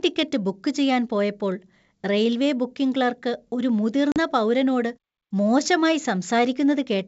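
Packet loss on an ADPCM call, at 4.12 to 4.18 s, between "റെയിൽവേ ബുക്കിംഗ് ക്ലർക്ക് ഒരു" and "പൗരനോട് മോശമായി": about 40 ms, roughly two packets, drops to hard-edged silence. The decoder's predictor and step size lose track of the sender's, so the speech resumes with brief distortion before settling.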